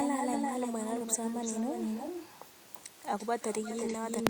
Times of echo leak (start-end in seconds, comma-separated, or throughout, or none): 0.00-2.46, 2.74-2.81, 3.18-4.29